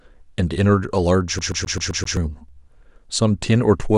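From 1.39 s to 2.17 s the speech locks into a CD stuck on one turn: a scratch keeps knocking the laser back one track at the same point, so a 130 ms slice of audio plays six times in a row, each pass cut off by a brief mute as the pickup jumps. It sounds like a rapid, perfectly even stutter. On a waveform the same small shape repeats at identical spacing, and a spectrogram shows a row of matching blocks separated by thin vertical gaps.

At 2.49 s there is an overlap between stream segments. Two pieces of the stream claimed the same stretch of time, and the player trimmed the supposed duplicate from audio that was never actually doubled. Those few milliseconds simply disappear, and with segment boundaries that fit 2 s segments the join falls here. It is heard as a sharp click or tiny skip. The waveform shows an abrupt step where the two edges fail to line up, and the spectrogram shows a single thin broadband vertical line.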